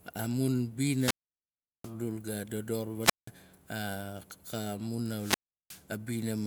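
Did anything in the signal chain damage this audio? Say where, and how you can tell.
Yes. The wireless link drops out three times, a wireless microphone squelch dropout at 0.95–1.93 s, 3.01–3.31 s and 5.12–5.86 s. Each brings rising hiss, then near silence of about 740 ms, 180 ms and 360 ms as the fading RF signal trips the receiver's squelch, before speech returns.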